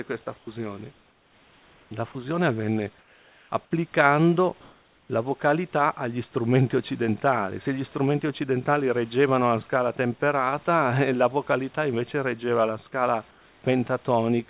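At 0.38 to 0.47 s, a short stretch of speech vanishes into steady hiss. This is sound dropped by the voice detector. It likely mistook a quiet moment of speech for background and stopped sending, so filler noise played instead.

From 0.92 to 1.91 s the real room background is swapped for comfort noise. It is flat and featureless, and about 4 dB quieter. The sender likely stopped transmitting during the pause, and the receiver synthesised a rough imitation of the room.

At 1.89 to 1.91 s the next sound starts abruptly, missing its soft beginning. This is an onset clipped by the voice detector. The detector was likely slow to react, and the first 20 ms were never sent.

At 2.12 to 2.15 s, sound again drops briefly into noise. This is likely another voice detector cut.

Comfort noise returns three more times. From 2.99 to 3.50 s it is about 4 dB quieter than the room. From 4.61 to 5.09 s it is about 1 dB louder. 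From 13.31 to 13.64 s it is about 3 dB quieter. Each time, the background loses its texture, likely because transmission paused. The whole call path is band-limited, with nothing above 4 kHz.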